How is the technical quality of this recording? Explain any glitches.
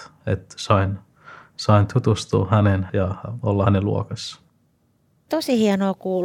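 No technical faults can be heard in this recording.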